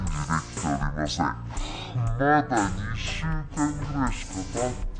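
From start to finish, the audio has a wrong sample rate fault. Everything runs at half speed and sits a full octave low, 12 semitones down. That exact halving fits material captured at 48 kHz being played back at 24 kHz without conversion.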